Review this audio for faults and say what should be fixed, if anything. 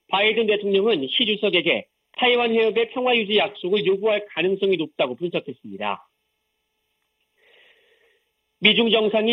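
Channel delay (comb filtering) runs throughout the clip. One channel arrives roughly 0.3 ms late, and the mono sum cancels at evenly spaced frequencies. The first notch sits around 1.5 kHz. The sound comes across hollow and phasey. Fix it by time-aligning both channels before any mono fold-down.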